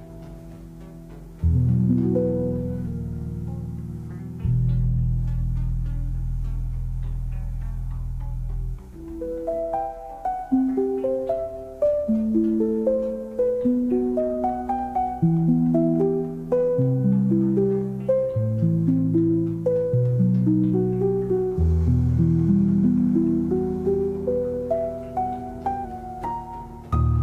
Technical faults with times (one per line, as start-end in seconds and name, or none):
25.85-27.23 drift correction step